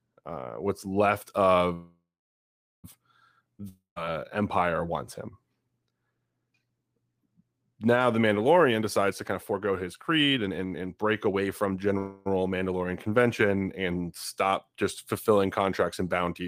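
At 1.73 s the speech stops and the last sound carries on as a fading buzz that settles into about 0.8 s of silence before the talker resumes at 2.86 s. This is a call audio freeze, likely from packets held up in transit so the jitter buffer ran dry. Nothing is lost, but roughly 1.1 s of extra delay now sits in the stream.

A long network dropout follows from 3.69 s to 3.98 s. The receiver again stretches the last sound into a decaying hiss, with about 0.14 s of near-silence, and when audio returns about 0.28 s of speech is simply gone, likely because those packets never arrived.

From 8.60 s to 11.95 s the talker sounds hurried. This is jitter buffer speed-up. The receiver trims short pitch-period slices repeatedly to work off the built-up delay. Playback runs at about 127% speed with pitch unchanged, and around a second of audio is removed across the span.

Straight after, at 11.98 s, a second call audio freeze appears. 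The last sound is extended as a brief fading buzz without falling to silence, and speech continues intact at 12.28 s, now about 0.28 s later than before.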